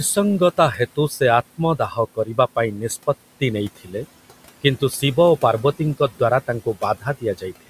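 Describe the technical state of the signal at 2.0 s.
At 2.0 s the noise suppressor has just finished mistaking part of the speech for noise. From 1.79 to 1.98 s it turned down about a tenth of a second of the speech by up to about 9 dB, so that sound comes out swallowed and faint.

Noise suppressor artifacts are present here as they are throughout. The suppressor lowers the bands it judges to be steady noise, frame by frame, by about 17 dB, so the room noise, about 18 dB below the speech, sinks and rises.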